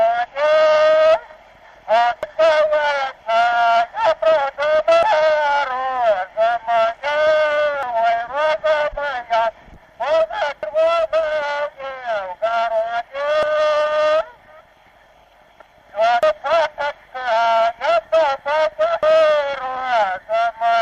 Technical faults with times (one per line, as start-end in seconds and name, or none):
2.23 audio missing between chunks
5.03 audio missing between chunks
7.83 audio missing between chunks
10.63 audio missing between chunks
13.43 audio missing between chunks
16.23 audio missing between chunks
19.03 audio missing between chunks